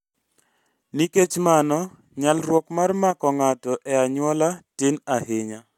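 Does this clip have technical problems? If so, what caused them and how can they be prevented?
No, there are no technical problems in this clip.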